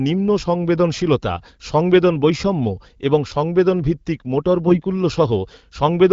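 From 4.66 to 4.81 s, AMR bit errors in the AMR-WB stream turn the speech hoarse and gargly. This fits about five corrupted 20 ms frames at an error rate of around five percent. Unlike packet loss, nothing drops out or repeats: pitch and level hold.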